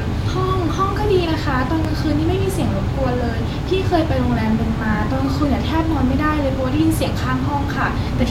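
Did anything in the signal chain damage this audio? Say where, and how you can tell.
Yes, there's a single loud pop from 1.85 to 1.88 s, standing out well above the speech, which carries on underneath it. It's likely a sudden voltage step or pulse from a plug, switch, static discharge or driver glitch, shaped into a sharp pop by the circuits downstream.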